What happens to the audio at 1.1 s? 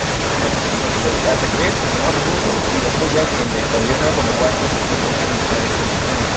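Echo leak runs through the whole clip, 0 to 6.37 s: a copy of the voice repeats about 179 ms later, roughly as loud as the original, likely from an echo canceller failing to remove loudspeaker sound.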